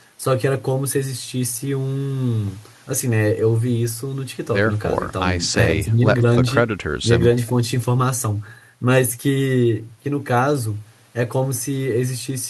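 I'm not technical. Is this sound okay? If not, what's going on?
Yes, nothing about this recording stood out as a problem when I listened to it.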